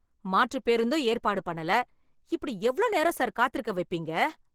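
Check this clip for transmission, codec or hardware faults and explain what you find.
There's one fault, and it runs through the whole recording: Opus compression, plainly audible on the speech. The low end sounds muffled and hoarse, and the upper range comes across grainy and rough. That points to the encoder being in its hybrid mode, with a speech coder handling the lower band and the transform coder filling the top, at a rate that fits roughly 16 kbps. The bandwidth still reaches fullband.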